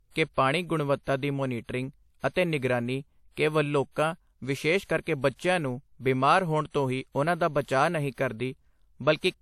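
Throughout, the speech carries layered artefacts with nothing above 16.1 kHz: likely transcoding between lossy codecs, MP3 then WMA, both fitting 64 kbit/s.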